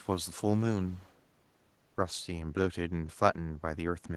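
From 0.82 to 1.2 s a faint echo leak trails the speech, a discrete copy arriving 246 ms late and roughly 35 dB down, likely from a loudspeaker echo canceller letting some pickup through. Unlike room reverberation, it is a separate delayed repeat, not a smooth tail.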